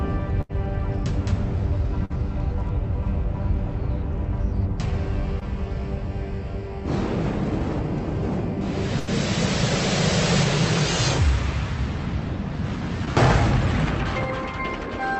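At 0.41 to 0.51 s, 2.05 to 2.12 s and 8.99 to 9.09 s, a burst of packet loss occurs: the receiver stretches the last sound into a fading buzz or hiss, then resumes with about 80, 40 and 80 ms missing. At 5.40 to 5.43 s and 13.05 to 13.09 s, a short concealed packet loss leaves roughly 20 ms gaps, each filled by a quick extrapolation that is heard as a brief smear or wobble. Throughout, the WebRTC call path's Opus coding limits the band to about 8 kHz, which fits a bitrate of about 32 kbps.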